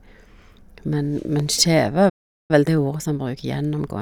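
At 1.40 to 1.42 s a single loud pop cuts through the speech, peaking a few decibels above the voice, while the speech carries on underneath without a break. The likely cause is a brief voltage step, such as a switch or driver glitch, entering the signal chain. That continuity is what separates it from a dropout or a stall: nothing goes missing, and a short, sharp pulse simply sits on top of the audio.

From 2.09 to 2.51 s the output goes fully silent for about 400 ms, mid-flow, and then resumes. This is a playback stall: the player likely ran out of buffered data or had its thread blocked and could not supply samples until it recovered. Unlike a pop or click, nothing is added. The sound just stops, and the gap is long enough to register as a hesitation rather than a tick.

From 2.51 s to the end, the speech runs at about 1.1 times normal speed with its pitch unchanged. This is time-compressed catch-up: after the stall, the player trims its backlog by cutting out small slices and cross-fading across the joins. 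Because the pitch holds steady, this is distinct from a simple resampling speed-up, which would raise the pitch along with the tempo.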